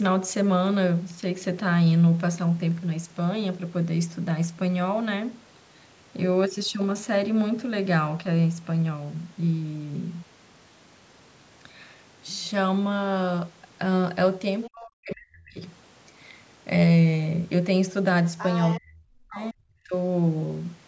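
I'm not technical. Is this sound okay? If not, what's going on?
No. Two kinds of trouble show up, each twice.

Other side's voice leaking through, at 14.63 to 14.68 s and 18.38 to 18.80 s: a second voice slips in under the talker, just a faint blip the first time and noticeably louder the second. This is likely because the talker's device plays the other caller through a loudspeaker, the microphone picks that up again, and the echo-removing step didn't scrub all of it away.

Speech suppressed in double talk, at 14.68 to 15.63 s and 18.79 to 19.94 s: right after each leak, the talker's voice drops sharply, at its deepest almost to silence, for roughly a second each time. Both people were likely speaking at once, and the echo-removing step, unable to tell the talker apart from the returning loudspeaker sound, turned everything down together, taking the real voice with it.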